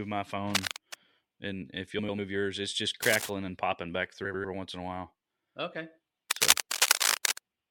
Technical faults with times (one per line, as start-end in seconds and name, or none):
0.55-0.94 cable scratch noise
1.99-2.19 frames out of order
3.02-3.30 cable scratch noise
4.24-4.45 frames out of order
6.31-7.39 cable scratch noise